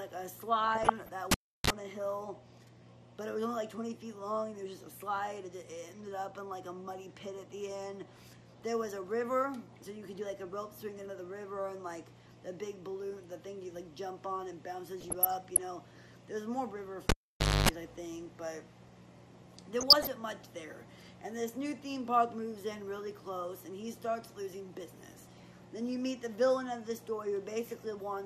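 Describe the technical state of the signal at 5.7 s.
At 5.7 s the signal carries MP2 compression damage, and it runs through the whole clip rather than just this moment. The top end sounds dull, with a gurgling, granular texture as upper sub-bands flicker on and off. This is likely MPEG Layer II coding starved of bits: with too few bits to share across its 32 sub-bands, it shuts off the highest ones and coarsely quantises the rest, which fits a rate around 80 kbps.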